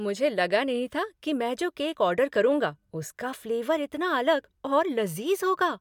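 No faults heard in this speech.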